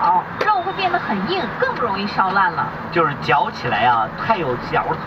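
No technical faults can be heard anywhere in the clip. Nothing in the signal breaks, stalls or changes character at any point.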